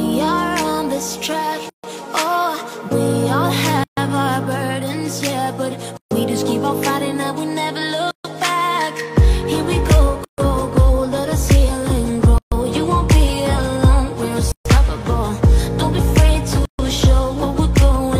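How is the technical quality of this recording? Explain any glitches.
The recording has regular dropouts: eight short silences break the continuous sound, at 1.69, 3.84, 5.97, 8.11, 10.25, 12.38, 14.52 and 16.65 s.

These are gaps at joins of encoded pieces. The audio was evidently encoded in segments of about 2 s and joined untrimmed, so each encoder's start-up delay and end padding remain. The result is a gap of about 140 ms with smeared edges, after which the sound resumes where it stopped.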